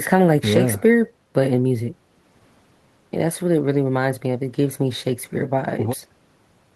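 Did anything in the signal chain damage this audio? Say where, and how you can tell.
No, nothing along the signal chain has left an audible mark on this speech recording.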